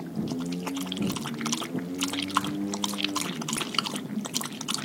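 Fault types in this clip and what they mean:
Damaged data in a compressed stream, at 1.14 s and 3.57 s: both events are very brief disturbances, lasting about 4 and 10 milliseconds. At these points part of the encoded data was lost, zeroed or overwritten by other bytes, so the decoder could not read those frames correctly. It lost sync and had to search for the next valid frame header before the sound could continue, leaving a momentary glitch each time.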